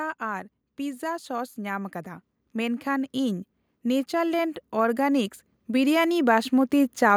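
The automatic gain control in this speech recording judged the input too quiet and kept raising its gain from 0.19 s to 7.12 s, adding about 12 dB over that span. Because the boost is applied to the whole signal rather than to the talker alone, the voice and the background noise climb together. The result is a slow, steady swell in loudness across nearly the entire clip instead of a constant level.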